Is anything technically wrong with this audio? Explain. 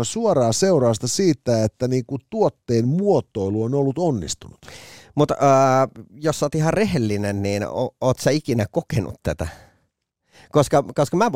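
No, there is no technical fault to report in this speech recording.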